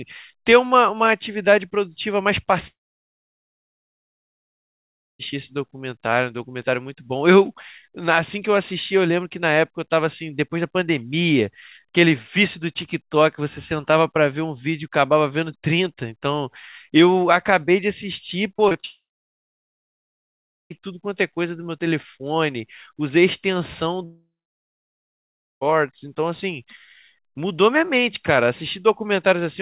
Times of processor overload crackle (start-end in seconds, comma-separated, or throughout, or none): none